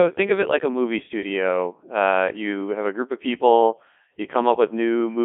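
Across the whole speech clip, the signal has passed through a Codec 2 vocoder, whose density of detail fits its highest 3.2 kbit/s mode. Rather than keeping the waveform, the decoder rebuilds the voice from sine waves driven by pitch, voicing, energy and a coarse spectral envelope, inside a band of roughly 250 Hz to 3.5 kHz. The damage is heavy. The speech comes out robotic and buzzy, with the natural texture of the voice replaced by synthetic tones.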